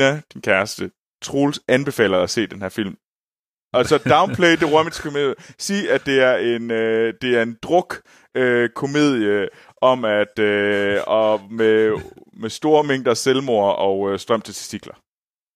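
No technical faults are audible in this speech recording.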